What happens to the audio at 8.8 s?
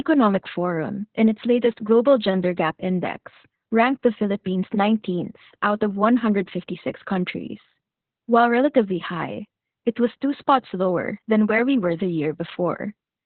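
Heavy Opus voice compression spans the whole clip, 8.8 s included: 8 kbps narrowband SILK coding drops everything above 4 kHz, leaving speech muffled, hoarse and faintly robotic.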